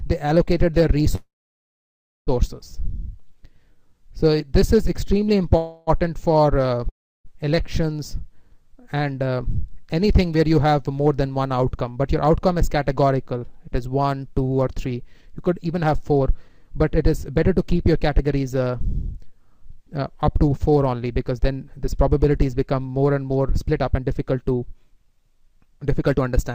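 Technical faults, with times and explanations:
1.15–2.30 s and 5.57–5.90 s, call audio freeze: The sound stalls, likely because delayed packets emptied the jitter buffer. The last sound is stretched into a fading buzz. The first gap lasts about 1.1 s and is mostly silence. The shorter 0.3 s gap stays filled. Playback resumes where it stopped, so nothing is lost.
6.89–7.28 s, long network dropout: About 0.36 s of audio never arrives, likely from a network outage. A brief fading fill gives way to roughly a third of a second of silence. The sound then returns further along, with the missing part skipped.
11.79–12.68 s, 14.59–22.45 s and 23.49–26.52 s, jitter buffer speed-up: The receiver trims pitch-period slices to shrink a swollen buffer. Playback runs at 107%, 109% and then 118% speed while the pitch stays the same. This removes roughly 70 ms, 0.7 s and half a second, so the sound feels hurried.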